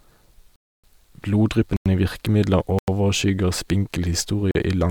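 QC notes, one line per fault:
0.56 to 4.55 s, block of digital silence: the output buffer likely went unfilled four times and zeros were played instead, at 0.56 to 0.84 s (279 ms), 1.77 to 1.86 s and 2.79 to 2.88 s (93 ms each, which fits a 4096-sample buffer), and 4.51 to 4.55 s (40 ms). The sound drops out with no fade.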